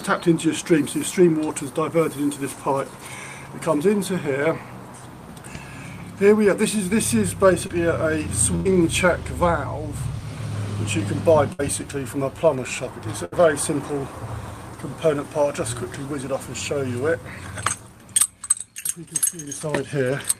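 Short concealed packet loss at 7.67 to 7.71 s: about 20 ms of audio never arrived, so the receiver extended the preceding sound, leaving a brief smear.

Burst of packet loss at 8.55 to 8.67 s (100 ms missing), 11.53 to 11.61 s (60 ms) and 13.25 to 13.36 s (60 ms): consecutive packets were lost, so the last sound is held and fades before the audio resumes with that stretch skipped.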